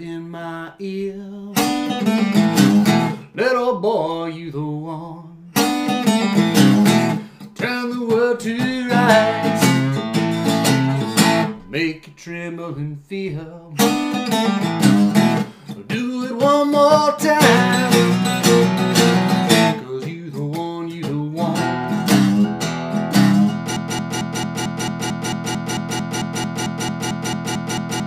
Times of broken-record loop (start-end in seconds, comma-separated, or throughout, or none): 23.76-28.06